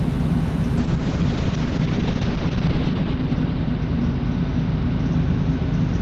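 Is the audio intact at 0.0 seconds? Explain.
Yes, the audio is intact at 0.0 seconds, with no fault present at that moment.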